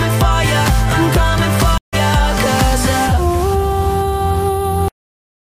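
At 1.78 s the audio drops out for about 149 ms, the mark of a stream reconnect: the connection broke, the player fell silent, then reconnected and began decoding afresh partway through the stream. When sound returns at 1.94 s it has jumped ahead by roughly a tenth of a second, so a short stretch of material is simply missing. The join is a gap followed by a displaced continuation, not a smooth edit.

At 4.88 s the clip suffers a cut-off end. The final buffers were never written out or played, so the audio halts in the middle of a sound and falls straight to digital silence, with no natural decay or tail. That silence runs to the end of the file at about 5.5 s, leaving the last stretch of the recording empty where the sound should have continued and died away.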